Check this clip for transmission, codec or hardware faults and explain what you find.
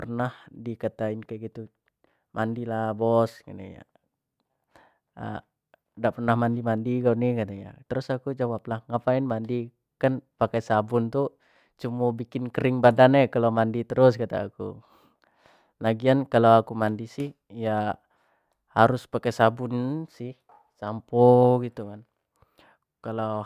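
I find no faults in the clip.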